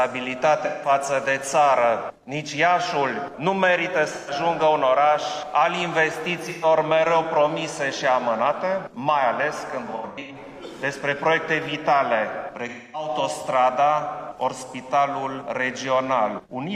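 AAC frame loss with concealment occurs at 0.64–0.89 s, 4.14–4.31 s, 6.43–6.65 s, 9.86–10.36 s, 12.68–13.09 s and 16.40–16.47 s. Frames went missing and the decoder filled each gap from the last good spectrum, so each gap becomes a brief smeared, noisy or phasey patch. The gaps, 43 to 299 ms long, fall in steps that fit 1024-sample frames. The 9.86 s event is a scatter of short dropouts, the longest about a tenth of a second.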